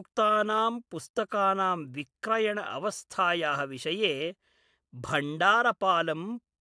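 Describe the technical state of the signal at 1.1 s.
At 1.1 s the speech signal is intact, with no dropout, distortion, glitch or other fault audible at that point.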